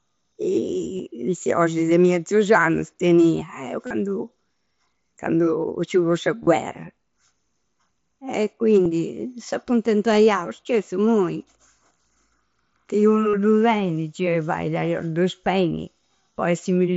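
Concealed Bluetooth headset packet loss dropped voice packets at 0.97–1.00, 3.87–3.91, 6.43–6.47 (just after "ci fu sa"), 8.84–8.86 and 13.31–13.34 s. Each gap of about 22 or 37 ms was filled by repeating recent waveform, which gives a brief buzzy hold and a slight warble on recovery, heard through the light graininess of the mSBC link.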